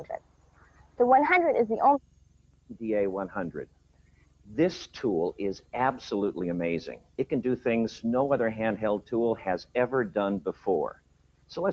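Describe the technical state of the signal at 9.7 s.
At 9.7 s, as throughout the clip, a noise suppressor is applied to music or sounds. It treats sustained tones and tails as noise, pulling them down by around 15 dB while attacks pass, so the sound pumps and thins. Unlike compressor pumping, the decays sink rather than the peaks. The band stops at 8 kHz, as expected on this call path.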